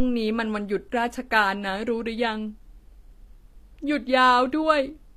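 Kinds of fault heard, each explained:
HE-AAC compression: The treble sounds rebuilt rather than real. The s sounds in this speech come out gritty and metallic. Nothing at all survives above 14.9 kHz. The likely cause is HE-AAC coding. It keeps only the lower part of the spectrum and fakes the top by copying lower bands upward under a coarse envelope. The copied harmonics do not match the originals. The damage is plainly audible, which fits a low bitrate of around 24 kbps.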